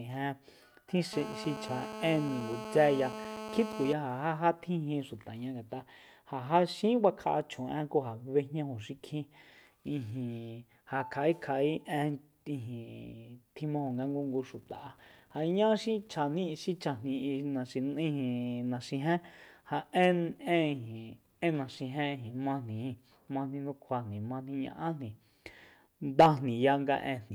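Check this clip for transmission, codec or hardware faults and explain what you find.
One fault is present: GSM phone buzz from 1.13 s to 3.93 s. A nearby 2G handset on a call was transmitting in bursts at about 217 Hz, and the audio input stage rectified those radio pulses, turning them into an audible signal with no relation to the speech. It sounds like a hard, raspy buzz rich in harmonics, nearly steady through that span at about 9 dB below the speech level.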